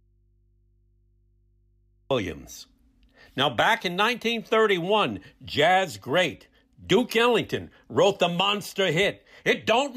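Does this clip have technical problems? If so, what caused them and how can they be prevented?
Yes. The signal path most likely lost its source while the input stayed open and the chain after it kept running. The result is an audio dropout to a faint residue that is already under way when the clip begins and lasts until 2.1 s. During that gap only mains hum remains, roughly 40 dB below the speech level. The speech then arrives abruptly rather than fading in. Securing connections and confirming the feed is live before recording starts would prevent this.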